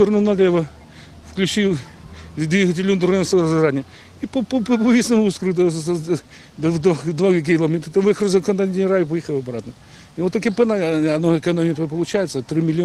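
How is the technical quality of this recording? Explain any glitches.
Nothing in the recording stood out as a technical problem on listening.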